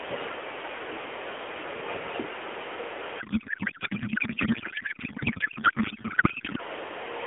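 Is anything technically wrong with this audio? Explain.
Yes. There is a codec payload misread from 3.20 to 6.61 s. The receiver reads the AMR frames with the wrong bit packing, consistent with octet-aligned frames decoded as bandwidth-efficient, so every field lands out of place. The speech becomes garbled, warbling noise that barely tracks it, running through the narrow 300 Hz to 3.4 kHz mobile-codec band.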